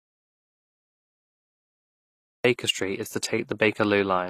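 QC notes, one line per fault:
Throughout, HE-AAC compression: The treble was likely rebuilt by spectral band replication rather than coded. Only the lower spectrum was carried directly, and the upper bands were copied up from below and shaped to a coarse envelope. The damage is plainly audible. Harmonics fail to line up across the crossover, so s sounds come out gritty or lispy rather than clean. Nothing reaches above 14.9 kHz, and the sound points to a low bitrate around 24 kbps.
0.00–2.45 s, audio dropout to silence: The input was already lost when the clip begins, likely through a disconnected device, a failed link or a stray mute, while recording carried on writing silence. For the first 2.45 s the gap is dead silent, with no room tone underneath. The speech then cuts in abruptly mid-flow, and whatever was said during the gap is gone.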